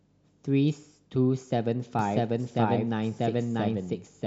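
From 1.99 s to the end, a doubled audio track appears: an equally loud copy trails by roughly 0.7 s, likely from a slower second capture path, showing as repeated, offset spectrogram patterns.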